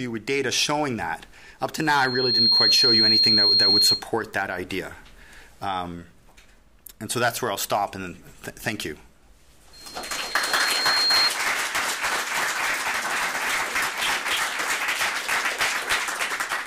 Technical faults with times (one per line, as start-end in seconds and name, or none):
1.77-4.04 loudspeaker feedback squeal
9.73-11.31 loudspeaker feedback squeal